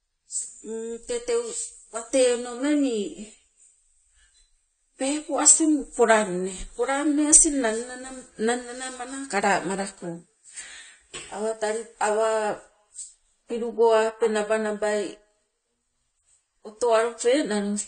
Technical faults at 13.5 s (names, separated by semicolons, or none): AAC compression